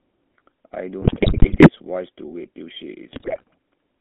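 Throughout, the GSM full-rate codec squeezes the sound into a 200 Hz to 3.5 kHz band with a gravelly, buzzy roughness. The coarse pulse excitation causes that buzz, which sets it apart from the smoother narrowband sound of plain telephone filtering. From 1.02 to 1.70 s and again from 3.12 to 3.44 s, GSM bit errors corrupt the decoder's filter, pitch and gain values. The sound breaks into squawks, pops and gargling rather than the silent gaps that packet loss would leave.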